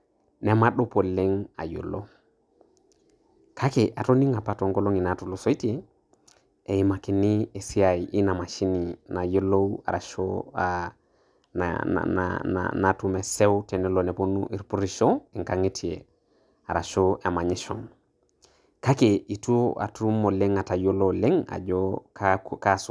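No technical faults can be heard anywhere in the speech recording, and the signal stays steady and intact throughout.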